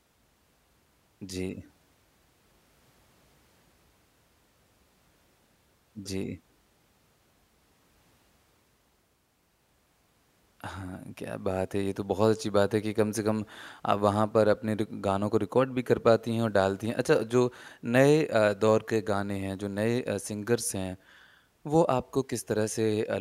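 Nothing technically wrong turns up anywhere in this recording of speech, so there are no fault times or causes to point to.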